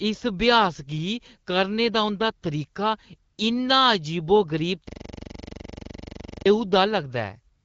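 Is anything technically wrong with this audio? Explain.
Yes. At 3.31 s, right after "करने दा उंʼदा तरीका", and again from 7.55 s to the end, the phone judged the talker silent and stopped sending speech frames for 60 ms and 96 ms. The receiver filled the gaps with AMR comfort noise, so the real background drops out for a smooth, steady synthetic hiss that switches in and out.

From 4.89 s to 6.46 s a system hang loop occurs. The computer or driver froze while the sound hardware kept replaying the same 42.67 ms ring-buffer segment, which fits a 2048-sample buffer. That one fragment repeats about three dozen times at 23.4 Hz, giving a rapid, mechanical stutter.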